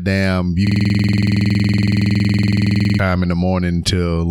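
Right after "damn you", at 0.67 s, a system hang loop takes over until 2.99 s. The driver or host stalled while the audio hardware kept replaying the same ring buffer, so one 46.4 ms slice of speech repeats exactly, dozens of times, which fits a 2048-sample buffer. At a 21.5 Hz repeat rate it sounds like a hard, rattling stutter. Unlike a dropout or codec concealment, the repeats are identical and perfectly regular, with no gaps or smearing.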